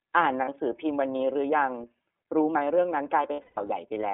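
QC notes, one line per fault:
throughout: iLBC codec. Sound is band-limited to roughly 250 Hz to 3.7 kHz, with a plainly rough, synthetic edge, which fits iLBC's 13.33 kbps, 30 ms frame mode.
0.45 to 0.49 s: lost iLBC frames. A brief held buzzy vowel of about 30 ms, one frame's worth, then clean recovery with no smeared tail afterwards.
3.33 to 3.58 s: lost iLBC frames. Scattered repeated pitch cycles mixed with noise, longest stretch about 150 ms and fading, then immediate recovery because each frame decodes independently.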